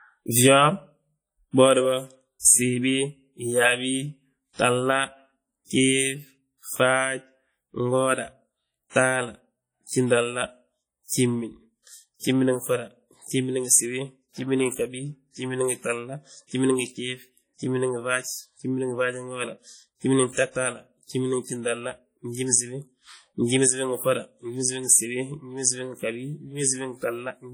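From start to finish the speech carries heavy WMA compression damage, likely from an early WMA encoder. The sound rings and washes. A hiss rises and falls with the voice. Quiet spectral detail is missing, which fits a low bitrate near 32 kbps. The transform works on long blocks, so coarse quantisation noise smears across tens of milliseconds. Weak components drop out entirely. The top of the band still reaches about 20.1 kHz.

From 2.39 to 2.44 s a pre-echo appears. A sharp attack lands late in a transform block. The noise sized for that loud onset also fills the quiet gap before it. About 47 ms of hiss arrives ahead of the attack. The onset itself sounds softened and smeared rather than crisp.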